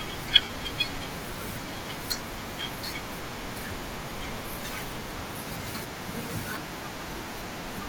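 Speech with lost LE Audio frames at 0.41–0.58 s, about 90 ms gone in runs up to around 50 ms, and briefly at 4.09 s. The LC3 decoder refills gaps with sign-scrambled copies of the last spectrum, showing as smeared, noisy bands replacing harmonics.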